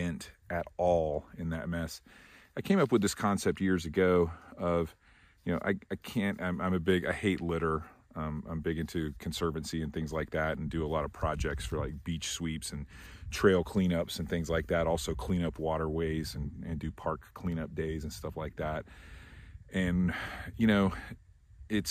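No faults to report; nothing in the signal chain breaks down anywhere in the clip.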